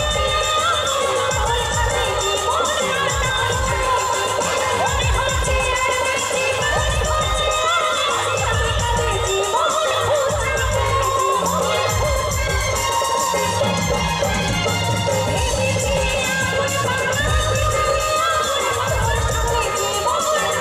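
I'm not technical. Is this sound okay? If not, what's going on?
No. The audio is most likely being picked up twice, with a second, slower route feeding in a copy of everything. This is called a doubled audio track. Throughout the clip, each sound comes back about two seconds later, a little quieter but just as clear and full, with no fading or roomy quality like a real echo. The two layers overlap from about two seconds in until the end.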